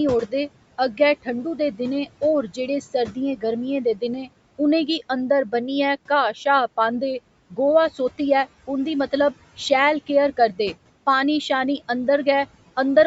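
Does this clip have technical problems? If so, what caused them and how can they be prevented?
Yes. Noise suppressor artifacts run through the whole clip. The room noise sits about 20 dB below the speech. A suppressor treats that steady noise as unwanted and lowers the bands holding it, frame by frame, by about 17 dB. So the background sinks away in the pauses and rises again under the speech. That gating of the noise floor is the audible fault. The 8 kHz upper limit is normal for the call's microphone processing. To prevent this, reduce the room noise at the source or set the suppressor to a gentler reduction.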